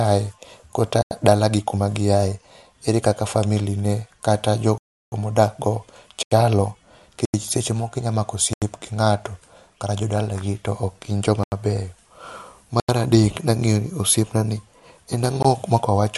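The output buffer was likely left unfilled repeatedly, producing blocks of digital silence. The speech drops out for about 85 ms at 1.02, 6.23, 7.25 (just before "seche moko inya mako"), 8.53, 11.44 and 12.80 s, for 341 ms at 4.78 s, and briefly at 15.43 s.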